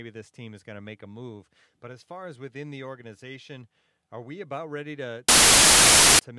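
File tags played as audio appear from 5.29 to 6.19 s, right after "we about ready to". For about 0.9 s the player treats an embedded cover picture as if it were samples. Because that picture is compressed data, its bytes are close to random, so the speech is replaced by very loud white noise: a harsh, flat hiss of static that switches on and off with hard edges and no fade.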